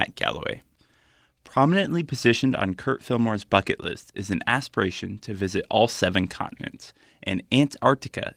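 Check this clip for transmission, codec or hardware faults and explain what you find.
No transmission, codec or hardware faults turn up.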